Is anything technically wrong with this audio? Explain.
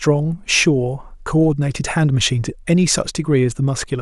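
No, nothing is technically wrong.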